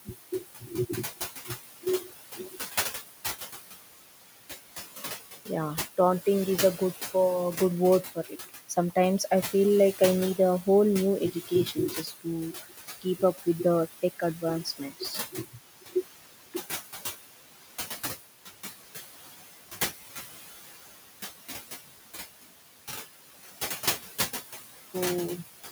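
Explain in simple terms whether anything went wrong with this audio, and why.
Yes, something went wrong. All through the clip, the background noise fades away whenever nobody is talking and creeps back up under the talking. These are noise suppressor artifacts: a cleanup filter keeps trying to push down the steady room noise, which sits below the speech, adjusting itself moment by moment, so the leftover noise pumps instead of staying even.

In four places, parts of the speech itself go faint or seem swallowed: from 0.05 to 2.56 s, 8.03 to 9.2 s, 11.33 to 13.65 s, and 14.02 to 15.96 s. This is speech cut by the noise suppressor. The same filter mistook some quiet sounds, like soft consonants or word endings, for background noise and turned them down sharply. Within each stretch only short moments are hit, adding up to somewhere between a fifth of a second and under a second each.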